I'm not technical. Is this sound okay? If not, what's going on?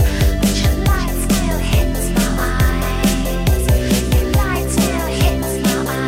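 No. At 4.98 seconds there is a corrupt frame decoded. The audio travels as small packed chunks, and a couple of them arrived with some of their data scrambled. The player used them anyway instead of throwing them out, so it rebuilt that tiny stretch from wrong instructions. You hear a brief, fairly loud chirp or blip that doesn't belong to the sound, lasting only a split second before things continue.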